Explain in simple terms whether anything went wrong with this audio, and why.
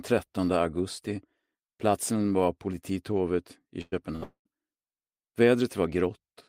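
A couple of things went wrong, all in a short stretch just before the 4.5-second mark.

First, there's a burst of packet loss at 3.81 to 3.94 s and again at 4.16 to 4.23 s. A small run of network packets never made it in time, so the player papered over the hole by stretching out the last bit of sound and letting it fade. You hear a brief smeared, dying tail, and then the audio jumps ahead. About a tenth of a second is gone the first time and roughly 60 ms the second.

Right after that second burst, from 4.23 to 4.47 s, things get worse. The sound trails off into a fading tail, and the last 90 ms or so goes completely silent before the audio picks up again. Roughly a fifth of a second is simply skipped. That longer gap, right on the heels of the earlier losses, points to a likely long network dropout, where the connection stopped delivering anything for a moment and the player ran out of material to stretch.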